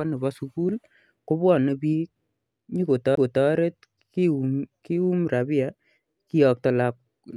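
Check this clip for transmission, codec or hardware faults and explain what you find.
One hardware fault is audible in this speech clip. A CD skip occurs at 3.15 s: a knock or a flaw in the disc sent the laser tracking onto a different turn of the disc's spiral, so the player briefly lost its place. It cut the output for a very short mute, around 20 ms, then resumed reading from another point on the disc. The result is a small tick followed by an abrupt discontinuity, where the speech jumps from one place to another.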